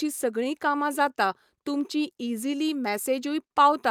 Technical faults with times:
0.00-3.90 clock drift between sender and receiver
0.44-3.52 repeated timing corrections

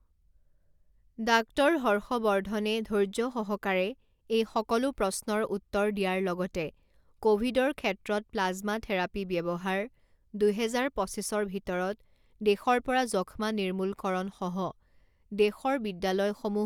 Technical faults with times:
none

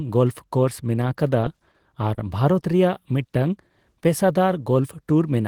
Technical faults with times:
1.71-1.76 short stall from a late packet
2.14-2.19 short stall from a late packet

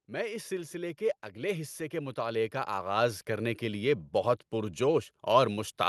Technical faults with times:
1.33-4.00 automatic gain rising

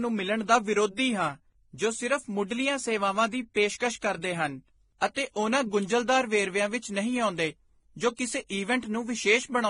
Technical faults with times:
0.00-9.70 transcoding between lossy codecs

